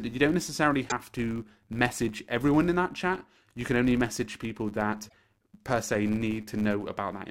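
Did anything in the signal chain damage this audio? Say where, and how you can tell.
Yes. A processing stage applies a filter that is restarted on every block. Throughout the speech there is a steady 100 Hz buzz whose loudness tracks the signal level. Each block starts the filter from silence and leaves a small transient, and a 100 Hz rate points to 10 ms blocks.

The compressed stream also carries damaged data, a codec or storage fault. From 0.85 to 0.92 s, between "that you don't necessarily" and "to message everyone in", a short glitch replaces the sound. The decoder misread corrupted frames there and had to resynchronise on the next frame header.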